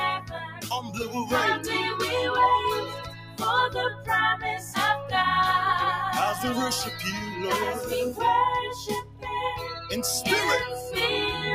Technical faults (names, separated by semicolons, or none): noise suppressor applied to music or sounds; sound cut by the noise suppressor